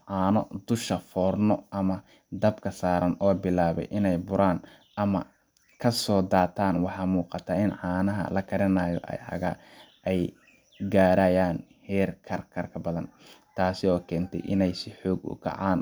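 Speech recording, with no technical faults to report.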